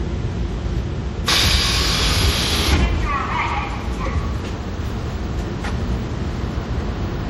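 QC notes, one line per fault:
throughout: generation loss. The audio was likely decoded and re-encoded as MP3 about four times, consistent with a 64 kbit/s chain. Each pass requantises on a shifted frame grid, so noise and spectral holes accumulate, leaving the sound swirly, hollow and smeared, with blurred attacks.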